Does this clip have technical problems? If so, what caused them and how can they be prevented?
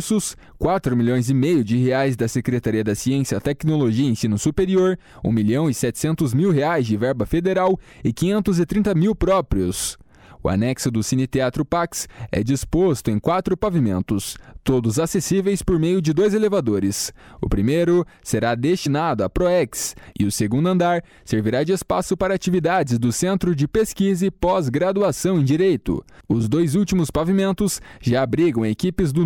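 Yes. Compressed frames are skipped at 17.18 s and 18.85 s. Each time, the audio jumps ahead by about one 26.1 ms frame, missing from the file or rejected by the decoder. Overlapping frames blur each join into a short smeared blip. Verified, error-checked file transfer prevents this.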